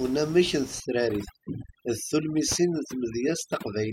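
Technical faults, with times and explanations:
0.8 to 3.92 s, overdone noise removal: a noise reducer set far too aggressively shuts off individual frequency bands whenever they sit near its noise estimate, taking the room noise, about 16 dB below the speech, and quiet speech detail with it. The background drops and breaks up into twinkling specks.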